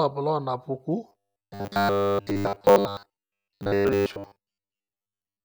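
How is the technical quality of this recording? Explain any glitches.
Not great. From 1.09 s right through to the end, the speech takes on a robotic sound from repeated short buffers. It turns into a stiff, metallic buzz pitched at 100 Hz that still loosely follows the words. The likely cause is audio arriving too slowly, so the playback keeps looping the last chunk, about 10 ms long given that pitch, while fresh material gets dropped. Most of that stretch seems to be repeats rather than real audio.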